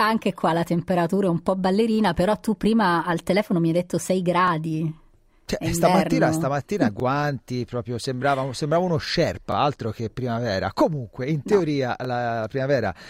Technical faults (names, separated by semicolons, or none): overlapping chunks